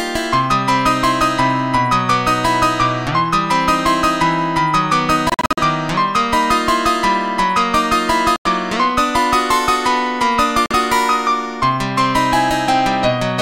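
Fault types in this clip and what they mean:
Bluetooth dropout: the sound cuts to silence in short, sharp-edged holes, a cluster of gaps spread over about 0.28 s near 5.3 s, then later losses of about 93 ms and 46 ms, resuming as if it had played on, likely from wireless packets arriving too late.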